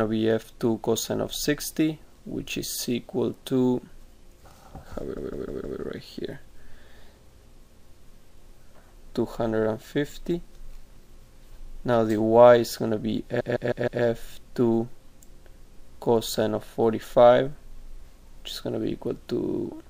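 Repeated frames stutter at 5.16–5.79 s and 13.39–14.02 s, where a 157 ms block replays four extra times, and at 19.43–19.58 s, where a 52 ms block replays three times. It is identical repetition that adds time, not a gap or dropout.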